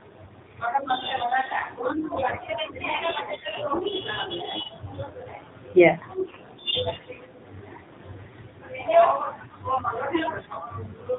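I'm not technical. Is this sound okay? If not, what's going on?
No. The whole recording has passed through the AMR narrowband mobile codec, the speech coding used on older 2G and 3G phone calls. It keeps nothing above about 4 kHz, so the voice sounds muffled and boxy, and at this low quality it also has a buzzy, artificial edge. Simply cutting the treble would make the voice dull. This codec instead rebuilds the voice from a simplified model, and that is why it sounds synthetic.

From about 6.26 to 6.37 s there is a short burst of AMR bit errors. Some of the data arrived corrupted on a weak connection, so for roughly a tenth of a second the voice turns hoarse, scratchy and gargly. A lost piece of data on a call would leave a gap or a smeared repeat. Here the voice keeps roughly its pitch and loudness and only its texture breaks up, which points to corrupted data rather than missing data.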